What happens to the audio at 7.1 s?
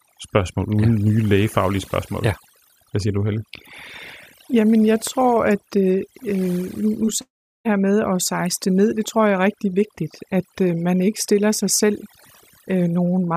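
Between 7.05 and 7.09 s, a short concealed packet loss occurs. Roughly 20 ms of the stream failed to reach the decoder in time. The receiver patched the gap by extending the sound just before it, from its pitch if voiced or as shaped noise if not, and then cross-faded back into the real signal. It comes across as a brief smear or wobble, and a short consonant there may drop out.

Overdone noise removal also runs through this moment, as it does across the whole clip. A noise reduction stage set far too aggressively pulls individual frequency bands down or out whenever they sit close to its noise estimate, taking the quieter parts of the voice with them. Around 7.1 s the background drops away and breaks up into twinkling specks.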